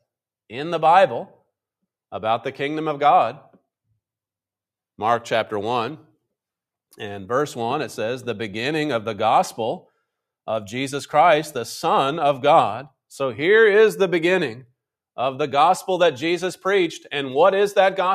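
Nothing stood out as a technical fault at any point on listening.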